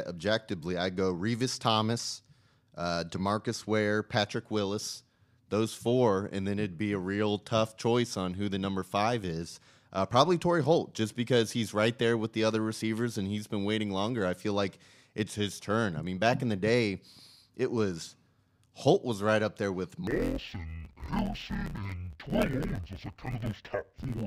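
From 20.07 s to the end at 24.27 s, the speech shows interleaved audio read as planar. Each block of alternating left and right samples is split in half, with the first half taken as left and the second as right. Each half plays at half speed, but together they keep the pace. The blocks here are short, about 11.6 ms, which fits a 512-sample block. So the speech turns dull and robotic, with a buzz at about 86 Hz and no clear octave drop.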